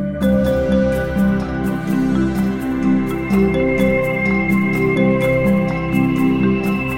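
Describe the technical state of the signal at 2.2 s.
The signal is intact at 2.2 s, with no dropout, distortion, glitch or other technical fault audible at that moment.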